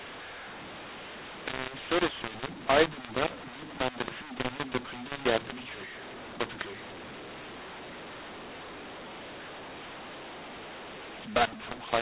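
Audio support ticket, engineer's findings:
Harsh, gritty distortion across the whole clip; pauses hiss instead of going silent, loud and soft passages sound unevenly scaled. Mu-law and A-law mixed up: telephone mu-law samples decoded as A-law, scrambling levels, lifting quietest samples above silence. The G.711 narrowband 4 kHz limit is audible beneath the damage.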